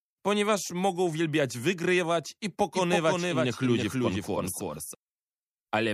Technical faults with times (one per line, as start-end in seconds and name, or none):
2.75-4.95 doubled audio track